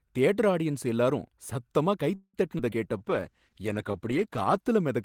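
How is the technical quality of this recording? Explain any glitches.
The speech in this recording has a cluster of call-network glitches packed into its middle and end, starting just after two seconds.

From 2.15 to 2.37 s there's a call audio freeze: the sound stalls and stretches into a fading buzz with about 40 ms of silence, likely packets arriving late. Nothing's lost, it just resumes after the gap.

At 2.58 s and again at 2.71 s you get short concealed packet loss. About 40 ms dropped out each time and got papered over, so you hear a quick smear or wobble.

From 2.97 to 3.93 s the jitter buffer slow-down kicks in. The receiver repeats tiny pitch-period slices to rebuild its reserve, so speech drags at about 94% speed, adding 66 ms.

Overlapping that, from 2.99 to 4.72 s, there's a call bitrate drop from 32 to 13 kbps, bottoming out for 1.6 s. The encoder codes coarser, so things turn rough and muffled.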